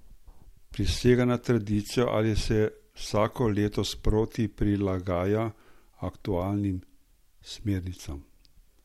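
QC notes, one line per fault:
Nothing to flag on this speech clip; I didn't hear a single problem anywhere in it.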